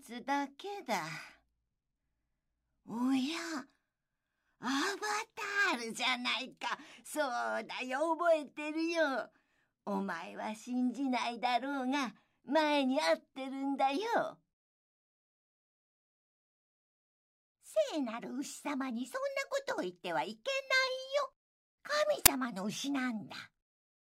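File tags played as audio appear at 22.26 s: a block of metadata holding a compressed cover picture gets handed to the decoder as though it were sample data. Because compressed image bytes look statistically random, the player turns them into very loud white noise, a burst of static with abrupt, hard edges lasting about 10 ms. It registers as a sharp, loud crack of hiss, entirely unrelated to the surrounding sound.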